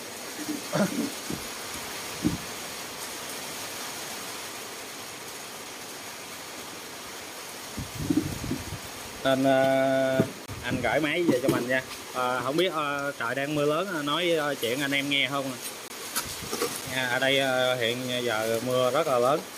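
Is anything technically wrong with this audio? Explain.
Yes. At 10.46 s and 15.88 s the sound drops out. Each is a 20 ms block of digital silence, where output samples were replaced by zeros with no fade.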